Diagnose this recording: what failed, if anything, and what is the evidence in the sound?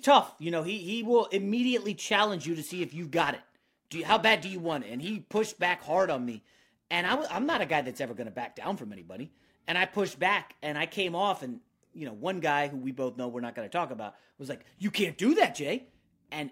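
The converter stage failed. From 2.44 s to 10.22 s the speech takes on a rough, metallic edge that is strongest on sibilants and other high-frequency content and disappears in the pauses. That pattern is periodic clock jitter. Interference at around 1 kHz is modulating the converter's sampling clock, so every spectral component picks up sidebands spaced about 1 kHz above and below it. The higher the frequency, the stronger those sidebands are.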